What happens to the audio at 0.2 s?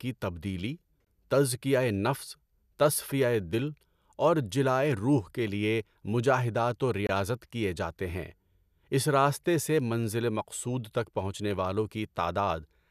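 Nothing goes wrong at 0.2 s; the speech plays through that moment intact, with no audible fault.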